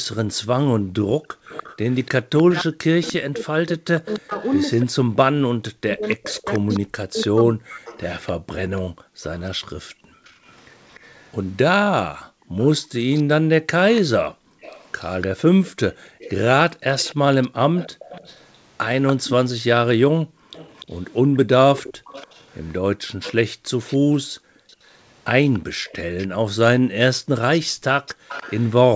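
From 0.78 to 1.45 s, the background is gated by the echo canceller. While the far end plays, the canceller pulls the microphone down by up to about 40 dB. The room sound drops out for under half a second in total.

From 1.45 s to 28.71 s there is an echo leak. A faint copy of the speech returns about 292 ms late, roughly 20 dB below the talker. It is likely loudspeaker sound that the far-end canceller failed to remove.

From 2.44 to 7.88 s, the speech is suppressed in double talk. The talker's voice dips by up to roughly 40 dB, for about 4 seconds in all. The likely cause is both sides speaking at once, with the canceller turning everything down.

The background is gated again from 8.82 to 14.61 s, for about 1.5 s in total. It is gated once more from 20.22 s to the end. Each time the room sound falls by up to about 40 dB and then returns. Across the clip, the band stops at 8 kHz, which fits a wideband call codec such as G.722.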